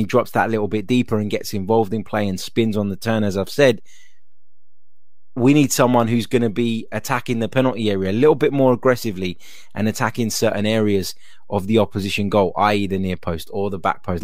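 A speech clip with a DC offset running the whole way through: the waveform sits shifted off zero by a constant of about -32 dBFS. You won't hear it as such, but it eats a bit of headroom and shows up as steady energy right at the bottom of the spectrum.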